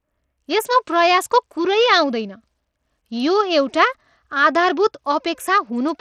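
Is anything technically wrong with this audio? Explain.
Yes. Throughout the speech there is plainly audible damage that points to Bluetooth SBC compression as the likely cause. The codec splits the sound into a few wide sub-bands and divides a small bit budget among them. The weak top bands get starved and the rest are coarsely quantised. The treble flickers in and out, with gritty noise and aliasing riding on the sound, which fits a low rate around 80 kbps. A clean low-pass filter would dull the top steadily rather than make it flicker. The fixed broad-band grit also sets SBC apart from the swirly, warbling artefacts of perceptual codecs like MP3.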